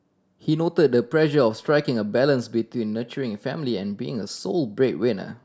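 A short recording of speech. Nothing technically wrong can be heard anywhere in it.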